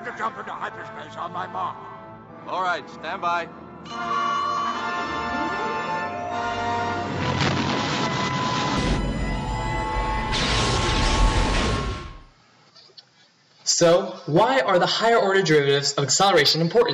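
From the start to 8.77 s the sound is capped at 7.6 kHz and duller, with a faint different noise floor about 50 dB down, then opens up abruptly with no gap or level jump, likely an input switched to a poorer device rather than a steady low-pass filter.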